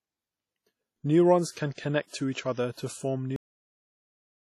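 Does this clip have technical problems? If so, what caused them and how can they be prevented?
Yes. The speech has a ringing, washy quality with hiss that rises and falls with the signal, and nothing above 16.3 kHz. The likely cause is heavy WMA compression, at a rate that fits about 32 kbps. Unlike plain noise, the hiss tracks the speech. Encoding at a higher bitrate, or with a newer codec, would prevent it.

Pre-echo appears as brief hiss just before sharp onsets: 1.51 to 1.57 s (56 ms), 1.74 to 1.78 s (42 ms, just before "to each"), and 2.72 to 2.77 s (53 ms). The codec spreads noise across its block, so the noise lands before each attack. Echo would follow the attack instead. Encoding with shorter blocks or higher bitrates would prevent it.

The cut-off end comes at 3.36 s, where the speech stops mid-sound and drops straight to digital silence. There is no decay, which distinguishes it from a fade or a natural pause. 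The last buffers were never written. Flushing and closing the recording properly would prevent it.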